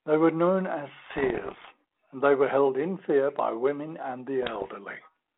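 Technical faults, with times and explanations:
1.06 to 1.71 s, bit errors on an ADPCM link: Pops and rough, gritty bursts break through the speech, and the level jumps briefly. Roughly 1.5 bits in a hundred are corrupted. Each flipped bit throws off the decoder's step size and predictor, so every error rings on for a few milliseconds.
4.42 to 4.68 s, bit errors on an ADPCM link: A shorter, slightly lighter burst of the same crackle. The band-limited telephone sound fits 32 kbit/s G.726.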